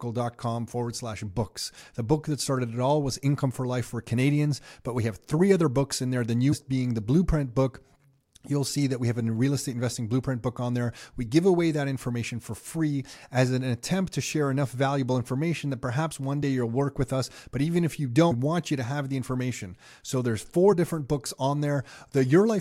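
At 6.52 to 6.54 s, the speech jumps ahead. Compressed frames were skipped there, roughly a tenth of a second of audio in all, which fits about four frames. Around 20.72 to 20.74 s it happens again, with a shorter loss of roughly 50 ms, perhaps two frames. Those few moments of speech simply vanish.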